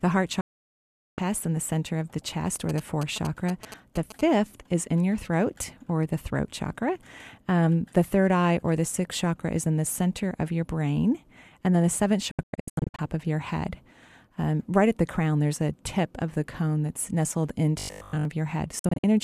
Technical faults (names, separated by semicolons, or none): digital broadcast dropout; GSM signalling bursts; robotic sound from repeated short buffers